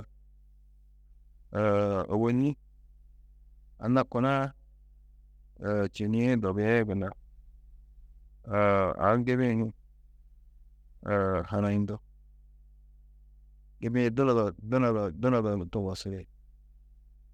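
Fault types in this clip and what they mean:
Mains hum: A steady low tone at 50 Hz runs under the speech for the entire clip, the signature of power-line current leaking into the signal path through a ground loop or the field of a nearby transformer. It sits roughly 30 dB below the speech, so it is quiet but constant, and it is most audible in pauses between phrases, where nothing masks it.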